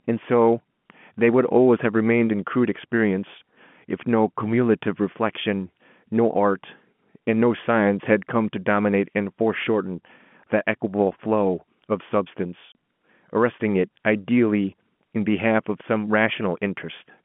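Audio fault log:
12.72 s, packet loss filled with silence: a single 30 ms hole cuts into the speech, where one packet went missing and the receiver played nothing in its place. The sound stops dead and restarts just as abruptly. On the waveform this shows as a flat, silent gap with steep cliffs either side. The spectrogram shows a thin blank vertical stripe across the telephone-band speech limited to roughly 150 Hz to 3.4 kHz.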